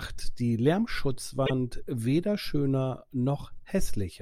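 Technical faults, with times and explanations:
1.45–1.51 s: repeated frames. Right there the speech stutters: a 48 ms chunk plays, then plays again straight away, so you hear that sliver of voice twice. It's the decoder being handed the same compressed data a second time, which fits a pair of frames being duplicated, and it stretches the audio by 48 ms.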